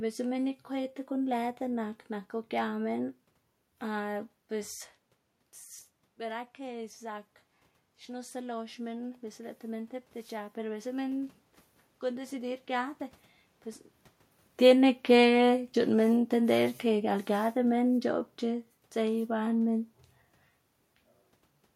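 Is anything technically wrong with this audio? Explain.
Yes, two gain-control faults in this speech. Automatic gain rising, 8.07 to 11.42 s: after the input dropped by about 13 dB, the gain control climbed about 5 dB, so voice and room noise swell together. Automatic gain falling, 14.52 to 18.04 s: judging the input too loud, the control lowered gain about 4 dB, and the voice sinks along with its background. The level shifts near 4.5 s and 14 s come from the talker moving relative to the microphone, not from the system.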